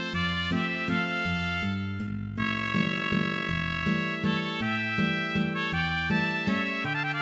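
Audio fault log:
2.07 to 3.85 s, overlap-add ripple: the music takes on a fast, rough flutter, like a robotic tremolo. The level swings by about 11 dB, roughly fifty times a second. The sound was split into windowed frames and joined back with overlaps that do not add up to a steady gain. So the loudness dips and recovers once per frame. The band stops at about 7 kHz, as expected from the wideband call path it passed through.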